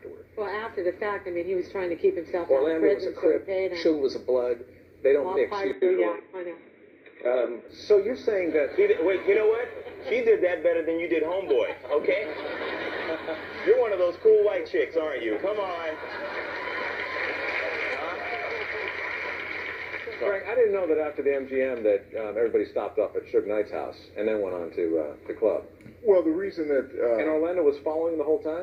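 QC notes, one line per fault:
5.73–7.69 s, input switched to a poorer device: the sound abruptly turns dull and boxy, with nothing above 3.8 kHz, a faint new noise floor about 45 dB down and no level jump or gap, then clears again, likely a brief change to a narrower-band microphone or headset profile.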